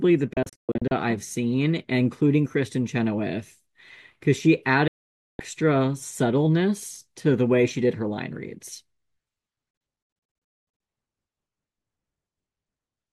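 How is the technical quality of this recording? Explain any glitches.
The quality suffers from three digital broadcast dropouts. The first is at 0.33–0.92 s, as short holes, the longest 128 ms. The second is a solid half-second gap at 4.88–5.40 s. The third is at 9.71–10.80 s, again scattered, the longest 224 ms. The receiver lost frames and muted with a 3 ms fade, so the speech cuts out abruptly and the missing audio is simply gone.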